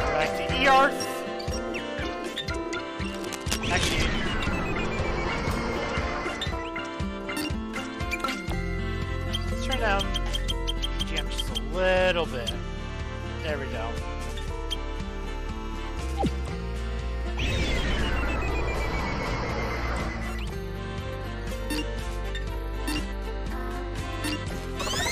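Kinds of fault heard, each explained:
cable scratch noise: dense, uneven scratching bursts from about 3.05 to 4.06 s, roughly 10 dB below the sound, likely from a worn cable or connector being moved.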